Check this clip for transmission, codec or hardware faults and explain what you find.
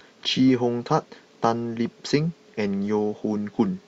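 No transmission, codec or hardware faults are present here.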